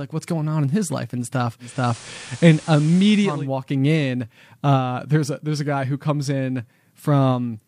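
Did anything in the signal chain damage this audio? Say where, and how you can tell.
Yes, digital radio blending to analogue, 1.59 to 3.48 s. The receiver fades to FM in 382 ms. Hiss appears, and level shifts about 4 dB.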